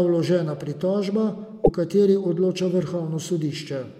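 At 1.63 s the speech jumps ahead, and a brief disturbance follows until 1.69 s. The likely cause is a broken MP3 bit reservoir. Frames were lost, so the next ones reached back for borrowed data and decoded the wrong bytes. The 60 ms disturbance fits MP3 frames of about 26 ms.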